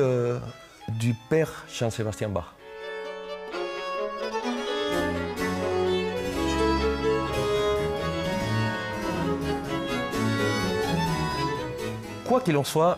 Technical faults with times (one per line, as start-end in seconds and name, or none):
none